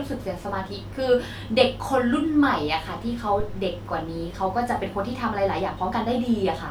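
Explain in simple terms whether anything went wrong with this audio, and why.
Something did go wrong, at about 3.40 seconds. A deep, dull thump lasting about 0.3 seconds cuts into the speech there. It's a phantom power thump: the microphone's power supply was switched while the input was live, and that sudden electrical step passed through the circuitry as a low boom. It fades in about 70 milliseconds. A breath pop or a bump to the microphone would follow the speaker or be more uneven. This is one clean electrical jolt.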